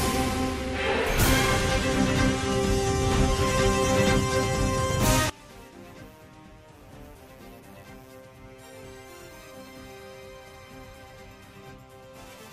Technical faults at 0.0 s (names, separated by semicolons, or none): none